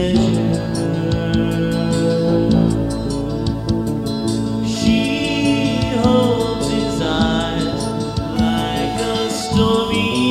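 No technical fault can be heard anywhere in this audio. There is nothing to place at a particular time or to trace to a cause.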